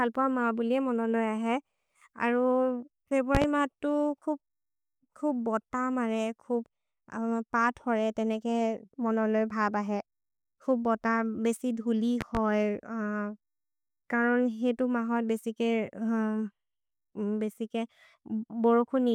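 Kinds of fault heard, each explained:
Loud pop: two sharp double pops sit on top of the speech, at 3.35 to 3.46 s and 12.21 to 12.39 s, peaking about 15 dB above it while the speech carries on underneath, likely from a sudden voltage step entering the signal chain.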